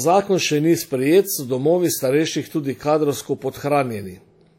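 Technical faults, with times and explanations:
Throughout, WMA compression: the speech carries plainly audible codec damage, with nothing above 18.4 kHz, likely from a Windows Media Audio transform encoder whose quantisation noise spreads across long blocks and whose coarse coding drops weak spectral detail, fitting a bitrate around 48 kbps.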